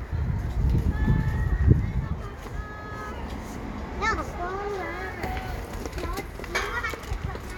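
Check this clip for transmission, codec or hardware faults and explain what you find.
Nothing stood out on listening to these sounds.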